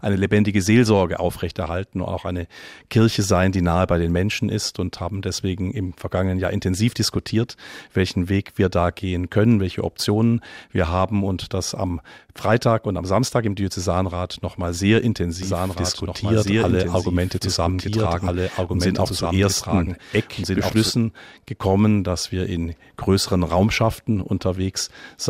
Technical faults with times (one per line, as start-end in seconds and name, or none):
15.43-20.91 doubled audio track